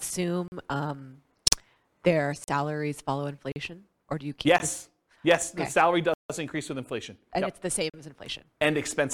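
Speech interrupted by seven abrupt dropouts, each cutting in and out: 0.48–0.52, 1.48–1.52, 2.44–2.48, 3.52–3.56, 4.58, 6.14–6.30 and 7.90–7.94 s. Most last 40 ms, with one 160 ms hole. These are blocks of digital silence, where the sound cuts out with no fade. The repeating 40 ms size points to an output buffer not being filled in time.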